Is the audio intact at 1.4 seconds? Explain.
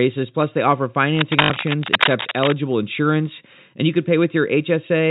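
No. From 1.15 to 2.58 s, cable scratch noise runs across the speech at roughly the same level as the speech: dense, uneven bursts of scratching and rustling, likely from a worn cable or connector whose contact resistance jumps as it moves. Unlike steady hiss or regular crackle, it is irregular and stops when the movement stops.

Inside that stretch, from 1.42 to 1.50 s, there is packet loss with the last packet repeated. About 80 ms of audio is lost and the previous chunk is replayed in its place, which fits four 20 ms packets. The loop buzzes at about 50 Hz, a brief robotic stutter rather than the silent gap of a plain dropout.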